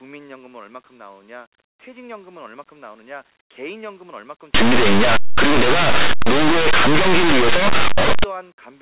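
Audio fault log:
4.55–8.24 s, linear audio read as companded: harsh, very loud distortion, as plain 8-bit samples are expanded as mu-law codes, turning values just on one side of zero into peaks.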